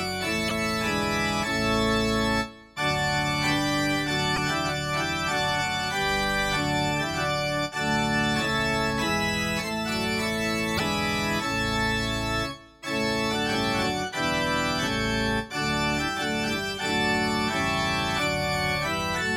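Brief blips, each lasting about 55 ms, break into the sound at 0.46 s, 4.33 s and 10.75 s. This is damaged data in a compressed stream: corrupted bytes make the decoder misread those frames and lose sync until it finds the next valid frame header.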